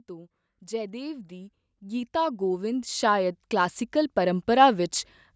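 A speech recording that's gone through call microphone processing, so nothing above 8 kHz, and the problem is automatic gain rising: from 0.07 s to 4.8 s the AGC keeps pushing level up by about 16 dB, so the voice and background noise swell together.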